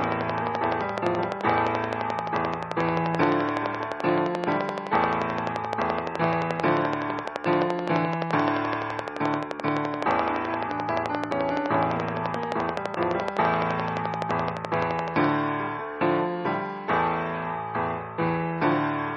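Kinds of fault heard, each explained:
Train of clicks: A steady run of sharp ticks sits over the sound from 0.04 s to about 15.25 s. They arrive at an even pace, about 11.6 per second, and there are roughly two hundred of them. Each click has much the same shape. The loudest rise some 15 dB above the sound itself. They carry on through the quieter gaps too. The likely cause is interference from nearby equipment or a faulty connection or power supply.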